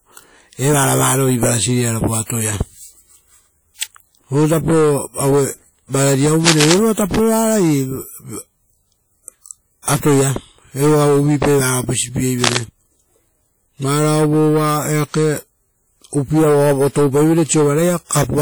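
Low-bitrate audio saved at a high bitrate runs through the whole clip: the speech keeps the artefacts of a likely earlier encoding near 48 kbit/s, which the high-bitrate MP3 cannot undo.

Cable scratch noise comes at 6.45 to 6.79 s and again at 12.44 to 12.59 s: brief rustling bursts about as loud as the speech, likely from a worn connector shifting its contact.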